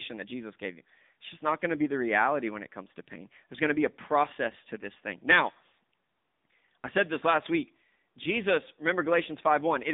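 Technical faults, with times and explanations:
Throughout: AMR narrowband mobile codec, band held to about 200 Hz–3.7 kHz with buzzy, synthetic texture, which fits roughly 8 kbps coding; unlike plain band-limiting, the voice itself sounds modelled.
7.32–7.49 s: loose connector crackle right after "I said this", an irregular scratchy burst as a contact makes and breaks, unlike steady codec distortion or single clicks.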